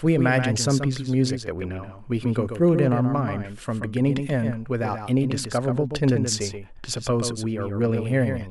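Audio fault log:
throughout: doubled audio track. The speech is likely being captured twice, with a second, slower path or an out-of-step edit laying a copy of the whole signal over the original. That copy trails by roughly 150 ms and sits about 10 dB lower. It carries the full frequency range with no decay or room colour, so instead of sounding like reverberation it comes across as a clean repeat shadowing every syllable.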